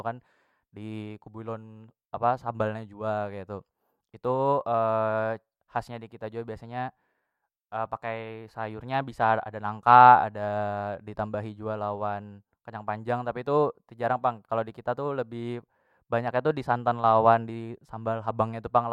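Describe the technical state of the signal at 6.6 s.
At 6.6 s the speech signal is intact, with no dropout, clipping, distortion or other audible fault.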